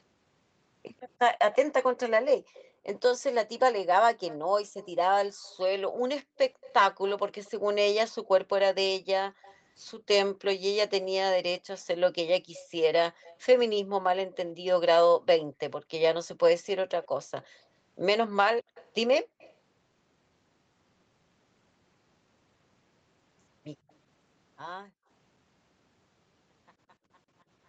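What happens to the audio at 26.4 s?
At 26.4 s the audio is intact: the speech is partway through a smooth fade-out that lowers the level evenly, with no click or hard edge.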